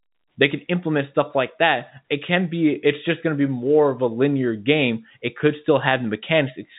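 No technical faults are audible.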